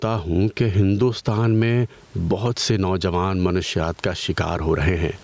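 A short speech recording with gain pumping from start to finish. The level swings by around 10 dB. Loud and quiet passages sit too close together, so the sound feels squashed. The likely cause is input gain set far too high, with a fast limiter clamping down on each peak. The room noise sits about 43 dB below the speech, and the call microphone processing leaves nothing above 8 kHz.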